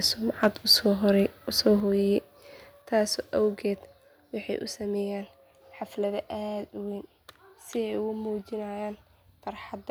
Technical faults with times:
0.43-0.73 microphone overload
1.66-1.68 microphone overload
1.80 microphone volume stepped down
2.82 microphone volume stepped down

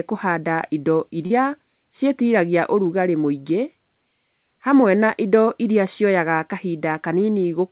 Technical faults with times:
1.26-1.32 short concealed packet loss

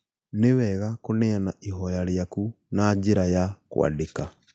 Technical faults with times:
0.35-3.60 automatic gain rising

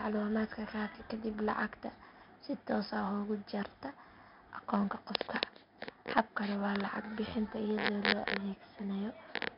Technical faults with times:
0.00-9.57 4-bit ADPCM compression

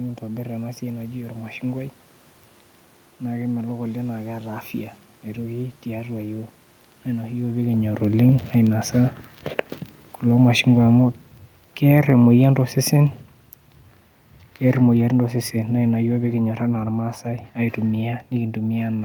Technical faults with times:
10.25-13.28 automatic gain falling
14.64-16.98 automatic gain falling

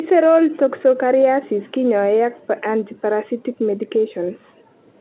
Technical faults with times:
none

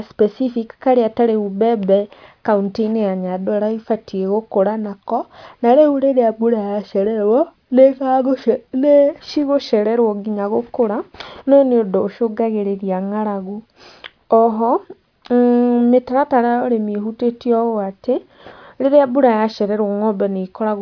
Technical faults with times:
none

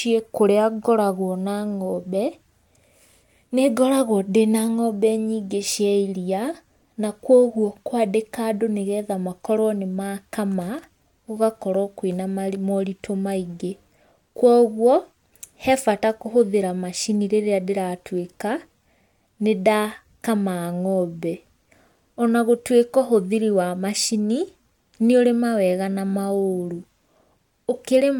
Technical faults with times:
none

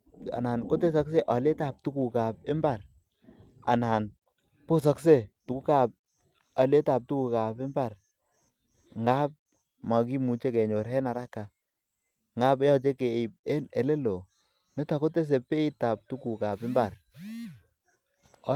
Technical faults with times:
none

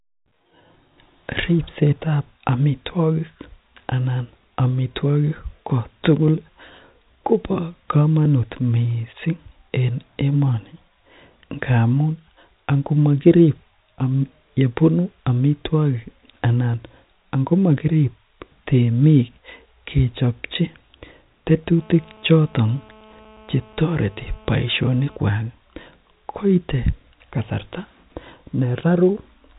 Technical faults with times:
21.78-25.17 GSM phone buzz

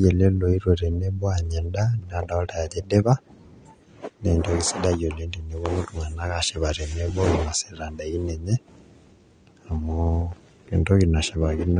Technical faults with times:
0.00-11.80 AAC compression

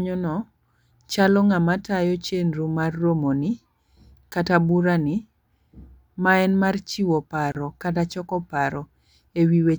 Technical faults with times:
7.52-7.55 gap at a join of encoded pieces

